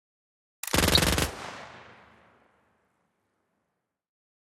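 A slap-like doubling trails every event by 40 ms throughout, from a channel delay (doubling): one channel runs late and both are summed to mono. From 0.84 to 0.99 s, short blips of noise break over the sound. This is DAB burbling, where weak reception lets a small fraction of bit errors corrupt the MP2 data and put blips of noise in single sub-bands across several frames.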